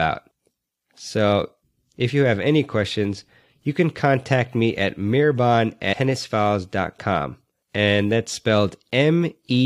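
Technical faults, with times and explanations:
5.92 s, damaged data in a compressed stream: Just after "contact me at mirbon", a stretch of the encoded bitstream arrives corrupted, its bytes lost or overwritten, so the decoder cannot parse the frame there. It loses sync and has to hunt for the next valid frame header before decoding resumes. In the meantime it outputs garbage samples or drops a frame, heard as a sharp, unnatural blip lasting about 14 ms that cuts across the speech.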